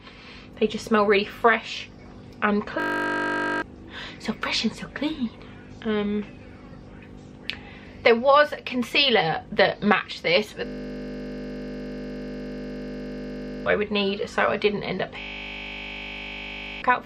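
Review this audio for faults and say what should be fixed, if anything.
A system hang loop occurs three times: 2.8 to 3.62 s, 10.66 to 13.66 s, and 15.2 to 16.82 s. Each time, one 20 ms slice repeats exactly, giving a steady buzz at 50 Hz. The host froze while the hardware kept replaying the same ring buffer, which fits a 20 ms buffer. The audio underneath is lost: under a second, about three seconds, and about a second and a half. To prevent it, fix the driver or system stall and mute output when the buffer stops refilling.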